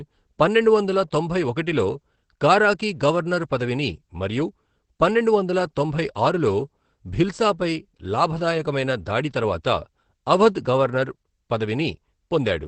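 Opus voice compression runs throughout the speech. The audio is band-limited at about 8 kHz, and the excitation is coded coarsely, which fits SILK at a low bitrate near 12 kbps. The speech sounds plainly muffled and hoarse, with a slightly robotic edge.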